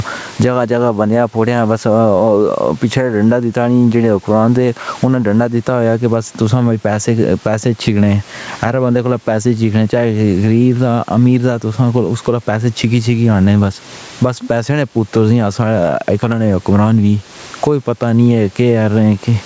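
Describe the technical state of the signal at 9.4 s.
Gain pumping is present at 9.4 s, as it is across the whole clip. The background room noise sits about 37 dB under the speech, and the gain swings by around 15 dB. The likely cause is microphone gain set far too high, with a fast limiter or compressor clamping it on every peak, which flattens loud and soft passages into a squashed sound.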